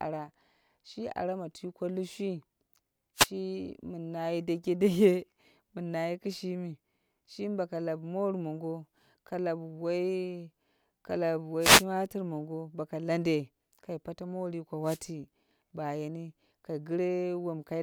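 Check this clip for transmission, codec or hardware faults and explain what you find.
The speech carries a wireless microphone noise hit, heard three times: 3.16 to 3.29 s, 11.60 to 11.85 s, and 14.84 to 15.00 s. Each lasts a fraction of a second, the longest about 0.25 s. The FM radio link fades briefly as reflected paths cancel the direct signal. The receiver's own noise then rises through the audio. Each hit sounds like a short swish or burst of static.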